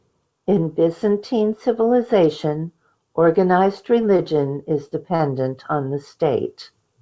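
At 4.17 to 4.20 s and again at 5.16 to 5.21 s there is a short stall from a late packet. Each time the next packet missed its playout slot, the jitter buffer emptied, and the receiver stretched the last sound by 17 ms and then 36 ms before resuming where it left off. Nothing is lost, but the sound holds slightly too long with a faint buzz or dip. The audio is band-limited at 8 kHz, consistent with a G.722 call path.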